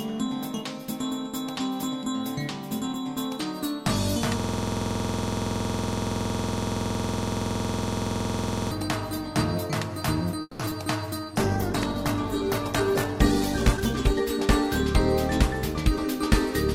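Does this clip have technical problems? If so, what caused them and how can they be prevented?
Yes. From 4.40 to 8.71 s a system hang loop repeats one 46 ms slice at 21.5 Hz, a machine-gun stutter that fits a 2048-sample ring buffer cycling while the host froze. Prevent it by fixing the driver stall or watchdog-muting output when the buffer stops refilling.

At 10.41 to 10.61 s a call audio freeze stretches the last sound into a fading buzz for about 180 ms, briefly silent, then resumes with nothing lost. Delayed packets that emptied the jitter buffer are the likely cause. Prevent it with a steadier network path or a deeper jitter buffer.

Short concealed packet loss at 10.65 and 10.70 s leaves two brief smears, each dropping about 20 ms of real audio that the decoder bridged with synthesized continuation. Prevent it by enabling forward error correction or reducing network loss.

A call bitrate drop from 64 to 11 kbps, 11.34 to 14.26 s, makes the sound coarse and muffled as the encoder sheds bits and high frequencies. 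Prevent it by securing more stable bandwidth or setting a higher minimum bitrate.

A jitter buffer speed-up from 13.77 to 14.46 s plays the audio about 11% fast at unchanged pitch, trimming roughly a tenth of a second to cut accumulated delay. Prevent it by smoothing packet arrival so bursts don't overfill the buffer.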